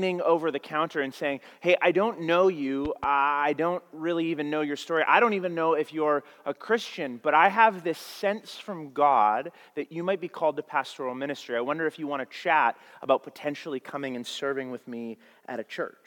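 Two sharp pops land on top of the sound between 2.85 and 3.06 s, a loud pop pair peaking a few decibels above the signal, most likely from a voltage pulse such as a plug or switch. A waveform shows two tall spikes; a spectrogram shows two thin full-band vertical stripes.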